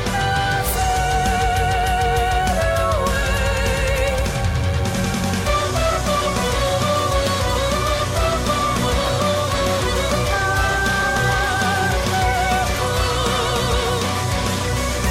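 From start to finish, a DECT cordless phone buzz sits under the sound: a nearby handset or base pulsing radio bursts at 100 Hz, rectified into a thin, harmonic-rich buzz well below the main signal.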